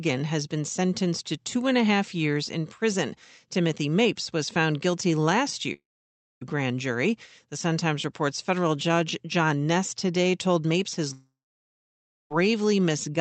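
Right after "was found guilty last", from 5.73 to 6.43 s, the sound breaks into a short fading buzz and then about 0.6 s of near silence before "grand jury" picks up. It's likely a long network dropout, with nothing arriving and the receiver stretching the last sound until it gives up. The same thing happens from 11.13 to 12.32 s, with roughly a full second gone quiet. The Opus call path's top end stops at about 8 kHz.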